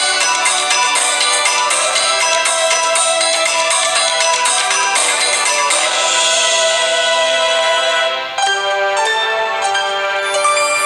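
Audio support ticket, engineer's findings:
Switching supply whistle, present throughout. High whine wandering between 4.07 and 4.40 kHz, roughly 30 dB under the signal. Probable component: SMPS in burst mode, pitch tracking load. Spectrogram: thin drifting line near 4 kHz spanning the whole clip. Waveform: no visible change.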